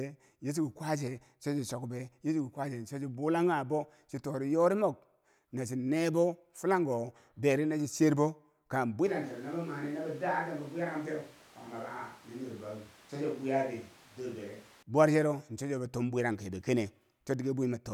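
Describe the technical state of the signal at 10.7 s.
At 10.7 s the speech sits inside a switch to a distant microphone, running from 9.07 to 14.82 s. It jumps to roomy and hollow with thinner bass, drops about 5 dB, and gains background noise around 25 dB below the speech, likely because the close mic's feed dropped out.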